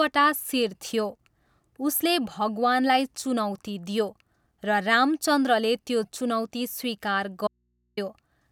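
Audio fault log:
7.47–7.97 s, audio dropout to a faint residue: speech cuts abruptly for about half a second, leaving only low mains hum far below the signal; likely a broken connection with the input still live.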